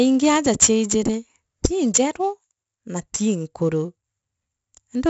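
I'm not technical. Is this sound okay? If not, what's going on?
No. The speech carries a gritty hiss on every loud moment and sounds dull, with nothing above 7.7 kHz. Heavy 4-bit ADPCM compression throughout stores each sample as a coarse step.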